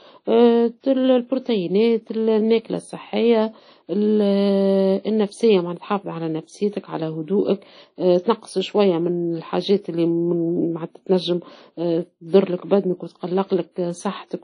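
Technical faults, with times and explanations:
Throughout: low-bitrate audio saved at a high bitrate. The speech stops dead above about 10.1 kHz, with nothing in the top band at all. The artefacts of the earlier heavy data reduction remain. The likely cause is an earlier encode at a very low rate, which fits a legacy codec near 32 kbit/s, later re-saved as a large MP3. That second pass cannot rebuild the missing detail or the lost top octave.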